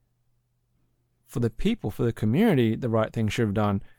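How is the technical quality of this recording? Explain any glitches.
Nothing in the recording stood out on listening, so there are no glitches to explain.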